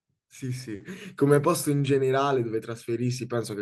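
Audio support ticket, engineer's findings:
Short stall from a late packet at 0.75–0.82 s: speech sound held about 50 ms, slight buzz or dip. Jitter buffer ran dry; receiver stretched audio until the packet arrived. Nothing lost, delay grows 50 ms.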